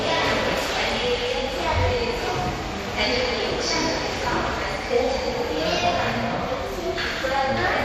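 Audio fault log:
throughout: MP2 compression. The audio is dull and carries a gurgling, granular roughness, with nothing above 14.8 kHz. This is likely MPEG Layer II coding at a bitrate that fits about 64 kbps. It splits the signal into 32 sub-bands, and too few bits mean upper bands switch on and off while the remaining ones are coarsely quantised. On a spectrogram, the top edge is a hard ceiling with blocky, flickering patches in the highest bands.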